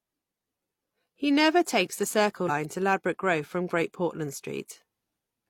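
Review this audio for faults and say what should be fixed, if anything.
Compressed frames skipped at about 2.45 to 2.50 s, right after "never take the": the speech jumps forward by roughly 100 ms, which fits a couple of frames of about 43 ms each that were missing or rejected by the decoder. On a spectrogram, the harmonics and formants shift abruptly at that point. The waveform shows an envelope discontinuity. Prevent it by delivering the stream over a checked, error-corrected path and re-encoding from an intact source.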